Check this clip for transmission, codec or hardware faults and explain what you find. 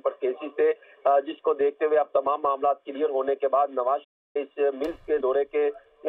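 One fault is present: a playback stall from 4.04 to 4.37 s. The audio cuts out mid-flow for about 307 ms, then resumes. The likely cause is the player's buffer running dry or its output thread being blocked, so nothing reached the output until it recovered.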